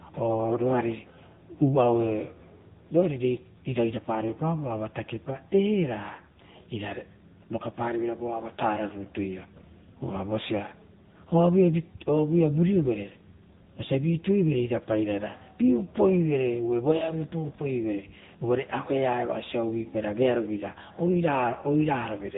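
The AMR narrowband mobile codec, at what sounds like 8 kbps, codes the speech throughout, cutting everything above 3.8 kHz and leaving it buzzy, synthetic.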